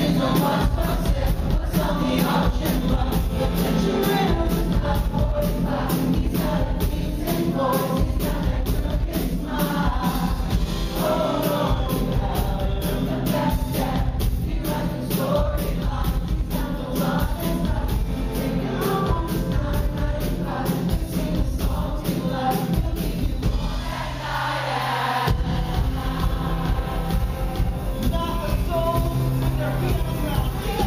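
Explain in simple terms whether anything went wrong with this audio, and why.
Nothing went wrong with this audio. Listening all the way through, no technical problem turns up at any point.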